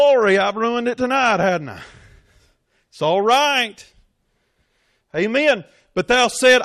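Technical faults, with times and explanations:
Nothing stood out on listening to this speech recording.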